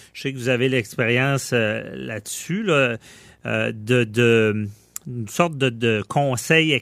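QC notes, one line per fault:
Throughout: video or display buzz. A steady buzz at the 59.94 Hz field rate, with hash above it and a faint whine at 15.7 kHz, sits roughly 35 dB under the speech, consistent with a screen or video cable coupling into the audio path.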